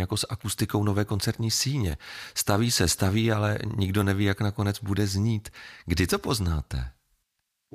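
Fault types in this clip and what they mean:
No technical faults can be heard in the speech signal, and its level and continuity hold steady throughout.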